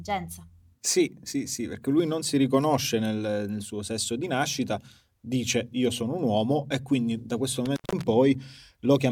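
Speech, with one intermittent contact fault from 7.66 to 8.03 s, right after "e quindi da questo". The sound cuts out for about 0.16 s, with crackle at each edge and faint hiss in the gap. A loose cable or plug briefly opening causes this.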